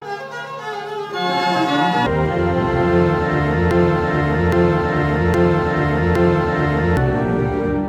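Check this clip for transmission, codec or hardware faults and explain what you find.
Two faults are audible in this music clip. From 0.00 to 2.06 s, a section at the wrong speed: the audio was likely clocked at 1.84 times its recorded rate, so it rushes and sits roughly ten semitones too high. From 3.71 to 6.97 s, a broken-record loop: a stalled player or stream likely kept resending its last 0.82 s fragment, which repeats four times back to back while the intended music is lost.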